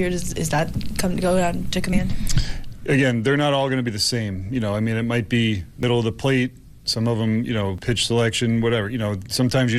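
Audio missing between chunks shows up as four brief skips at 1.93, 3.88, 5.83 and 7.78 s, each where about 50 ms of sound drops out and the two sides butt together without a gap. The even 2-second spacing points to chunked recording, likely losing a piece at each changeover.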